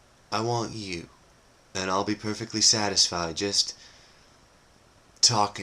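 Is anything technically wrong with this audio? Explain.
Yes. There is one fault. At 2.97 to 2.99 s, compressed frames are skipped. About one frame of the encoded audio never plays, either because it is missing or because the decoder rejected it as damaged. The sound jumps forward by roughly 10 ms, which fits a 10 ms frame length. You hear a break at the join where the sound lurches ahead.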